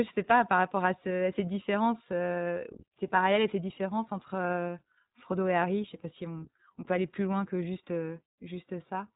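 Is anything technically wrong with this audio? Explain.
Yes. Throughout, the speech has passed through the iLBC codec, which codes each short frame independently, fitting 20 ms frames. Nothing above 3.8 kHz survives, leaving it muffled, rough and plainly synthetic.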